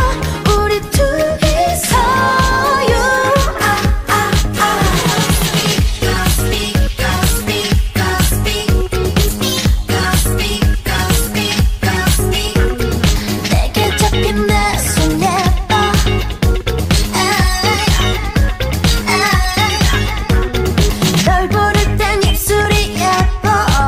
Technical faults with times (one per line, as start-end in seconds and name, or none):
13.84 dropped samples
22.65 dropped samples